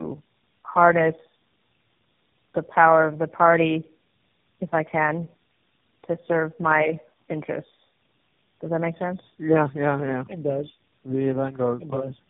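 Speech carried through tandem speech coding, likely re-encoded by about three narrowband codecs in succession, leaving it rough, muffled and warbly throughout, with nothing above 3.6 kHz.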